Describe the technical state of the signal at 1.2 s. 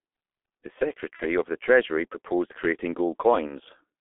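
VoIP packet loss concealed by the speech codec runs from 1.16 to 1.24 s, ending just before "of the". A gap that fits one lost 30 ms frame was filled by extrapolating the last pitch and filter at falling gain, so the sound smears into a fading buzzy tone or coloured noise and stays weak briefly after real data resumes.

Underneath, the G.723.1 codec is present throughout, including at this moment. Its band is limited to roughly 250 Hz to 3.5 kHz, and its heavy coding damage fits a stream of about 6 kbit/s with a slowly updated voice model. The result is muffled, hoarse speech with blurred consonants.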